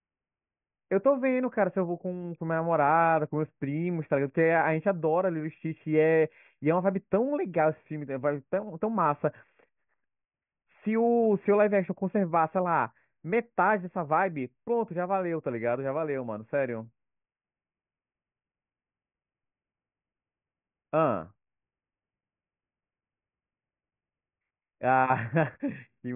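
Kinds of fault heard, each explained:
Nothing here stands out as a technical fault; the speech comes across without any dropouts, glitches or other problems to point to.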